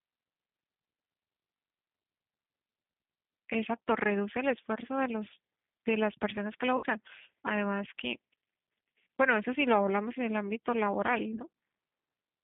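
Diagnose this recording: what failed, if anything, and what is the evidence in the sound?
The failure is at the codec stage, throughout the clip. The speech is held to a narrow line band of roughly 150 Hz to 3.6 kHz, with nothing above it. The codec damage is plainly audible as a rough, slightly synthetic texture. That fits the G.729 codec, likely the G.729A variant at 8 kbit/s. It rebuilds each short frame from a vocal tract filter, a pitch predictor and a few pulses, so fine detail is lost.

The second failure is on the network, where VoIP packet loss was concealed by the speech codec. At 6.77 to 6.85 s about 60 ms of audio is missing, which fits two lost packets. At 11.34 to 11.40 s a further 30 ms drops out, which fits one packet. In each gap the decoder repeats its last pitch and filter at falling gain. The sound smears into a fading buzzy tone or coloured noise. It stays weak for a moment after packets resume.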